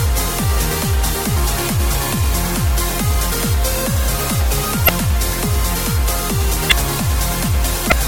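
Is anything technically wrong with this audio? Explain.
Yes. Throughout, the sound is watery and swirly with dulled treble and metallic chirping on bright, hissy content, likely from MP3 compression at a low bitrate such as 64 kbps: the encoder cuts the top band and switches weak frequency lines on and off between frames. Unlike the separate glitches, this damage is constant.

Damaged data in a compressed stream appears at 4.85–4.89 s, 6.68–6.72 s and 7.88–7.93 s as brief squawks or blips. The decoder misreads corrupted frames and resyncs at the next header. These are short isolated events, not steady smearing.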